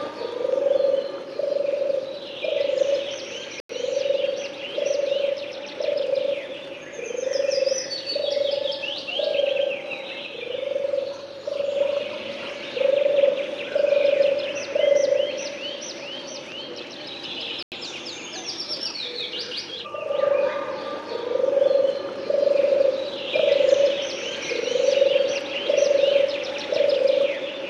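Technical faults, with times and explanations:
3.60–3.70 s, corrupt frame muted: the audio drops abruptly to digital silence for about 96 ms, a gap the length of roughly two compressed frames that the decoder rejected. Timing carries on unchanged afterwards, unlike a FLAC error, which produces noise rather than a hole.
5.28 s, corrupt FLAC frame: a brief error at about -32 dBFS, lasting only a couple of milliseconds. Flipped bits sent the FLAC predictor off on wrong values until the next intact frame restored clean decoding. It is heard as an added error, not missing sound.
17.46–17.72 s, corrupt frame muted: a longer silent hole of about 255 ms with a sharp onset, which fits around three consecutive frames being discarded and replaced with silence. The audio resumes exactly on schedule.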